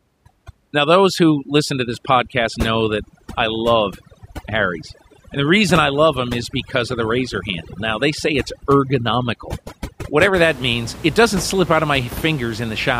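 From 0 to 10.34 s, overdone noise removal: a noise reduction stage set too strong switches off frequency bands near its noise estimate, taking quiet speech with them. The background drops and breaks up into twinkling specks until just before "that means it doesn't".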